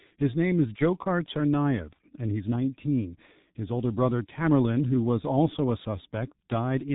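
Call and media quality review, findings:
Speech muffled and hoarse throughout, consonants smeared, no content above 3.8 kHz. Probable component: G.723.1 codec, heavy damage; 30 ms frames and slow voice-model updates blur transitions, consistent with the 6.3 kbit/s mode.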